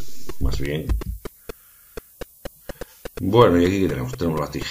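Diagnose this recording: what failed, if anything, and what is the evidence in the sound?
The sample-format conversion reduced the audio to 9 bits and applied low bit depth with noise shaping, feeding the rounding error back so it lands high in the spectrum. Throughout, a steady thin hiss sits roughly 25 dB below the signal and rises sharply toward the top of the band.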